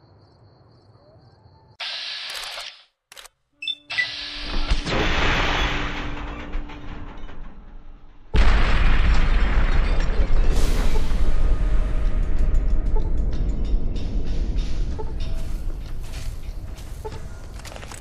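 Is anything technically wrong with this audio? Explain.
No, nothing is technically wrong.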